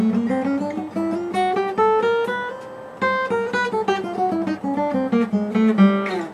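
No technical fault can be heard anywhere in this audio. Nothing in it calls for a timestamp or a fix.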